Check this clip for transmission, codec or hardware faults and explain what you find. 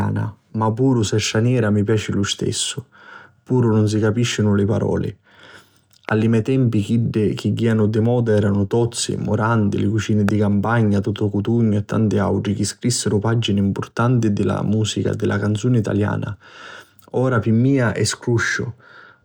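Two loud pops are present in the speech, one at 6.09 to 6.11 s, just before "li mei tempi chiddi", and one at 10.29 to 10.31 s. Each is a single sharp transient lasting about 20 ms and peaking roughly 15 dB above the speech, which continues underneath. The likely cause is a brief voltage step or pulse entering the chain, such as from a switch, static discharge or a driver glitch, which the following circuitry shapes into an audible pop.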